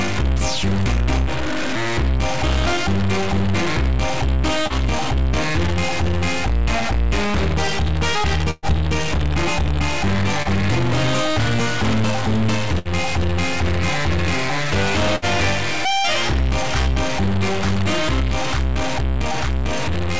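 From start to finish a distortion rides on the sound, and quiet stretches fill with a noise floor instead of falling silent. That points to a stuck bit, likely one converter bit held at a fixed value. Unlike ordinary clipping, it does not depend on loudness, and it persists in the pauses.

At 4.67 to 4.73 s, a short concealed packet loss leaves a brief smear where about 30 ms never arrived and was patched by continuing the preceding sound. The same happens at 10.43 to 10.48 s. Each is a quick wobble rather than an audible gap.

At 8.51 to 8.66 s, a burst of packet loss removes about 120 ms. The last sound is stretched into a held buzz or fading hiss before the audio jumps ahead. Shorter bursts of about 60 ms follow at 12.79 to 12.88 s and 15.16 to 15.25 s. These are longer and more obviously frozen than the brief smears, and some material is skipped. Through the call path, nothing is heard above 8 kHz, which fits G.722 at 64 kbps.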